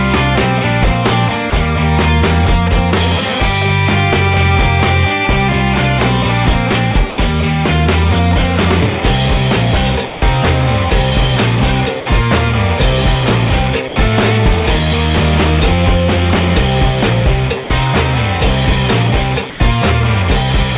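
At 1.50 to 1.52 s, 7.10 to 7.18, 10.08 to 10.22, 12.00 to 12.06, 13.88 to 13.96, 17.64 to 17.70 and 19.50 to 19.60 s, the sound briefly gives way to flat comfort noise for 20 to 140 ms, then snaps back. That's likely sound dropped by the voice detector: the sender judged those moments to be background, stopped sending, and the receiver filled in noise. Against the call's band, which tops out at 4 kHz, the gaps come across as short dull holes.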